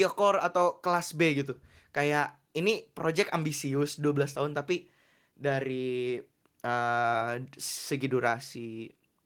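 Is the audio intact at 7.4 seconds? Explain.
Yes, the audio at 7.4 seconds is intact, with no dropout, click, distortion or other fault at that moment.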